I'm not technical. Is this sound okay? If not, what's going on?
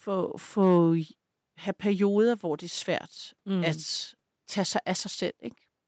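Yes, this recording sounds fine; nothing is wrong.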